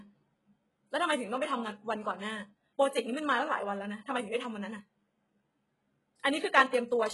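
A speech clip with HE-AAC compression artefacts running through its whole length. The s sounds come out gritty and lispy. The top end sounds bright but synthetic, with nothing above about 11.5 kHz. The likely cause is HE-AAC coding at a very low bitrate, around 12 kbps. Only the lower band is coded. The treble is rebuilt by copying lower bands upward, so its harmonics no longer match the real ones.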